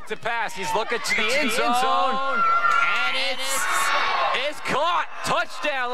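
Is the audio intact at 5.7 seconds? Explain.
Yes, the audio is intact at 5.7 seconds, with no dropout, click, distortion or other fault at that moment.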